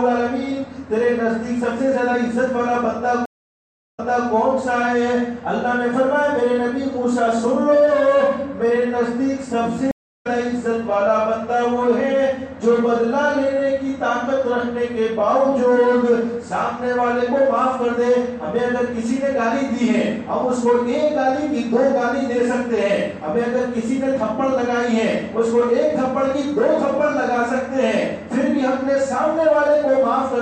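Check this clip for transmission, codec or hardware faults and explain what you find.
Two stream reconnects. At 3.26 to 4.29 s, silence lasts 0.73 s and the sound resumes 0.31 s earlier. At 9.91 to 10.27 s, a 0.34 s gap skips roughly 0.3 s ahead. A fresh decoder restarts mid-stream each time.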